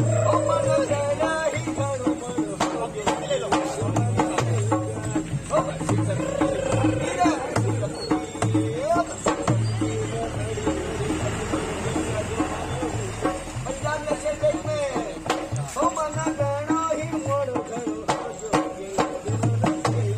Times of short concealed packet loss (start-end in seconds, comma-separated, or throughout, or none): none